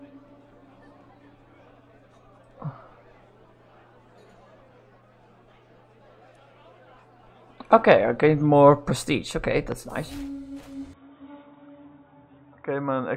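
At 9.72 s a single sharp loud pop lands on top of the sound, lasting about 35 ms and peaking a little above the surrounding level, while the audio carries on underneath. It is most likely a brief electrical transient, such as a plug, switch or static discharge, injecting a voltage spike that the following circuitry shapes into a short click-thump.

From 10.93 s to the end the sound abruptly turns dull and boxy, with nothing above 3.8 kHz, and it drops in level by a few decibels. A faint new noise floor, roughly 50 dB down, appears. There is no gap at the change. This points to the input being switched to a poorer device, likely a different microphone or a headset in its narrowband call mode, which carries its own limited bandwidth, gain and background hiss.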